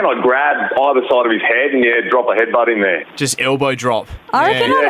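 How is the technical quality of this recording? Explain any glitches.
The recording is marred by gain pumping that runs through the whole clip. The level keeps lurching by roughly 10 dB, leaving everything squashed and breathing. The likely cause is input gain set far too high with a fast limiter or compressor clamping down on each peak. Unlike a noise gate, which chops the background to silence, this rides the gain up and down with each loud sound.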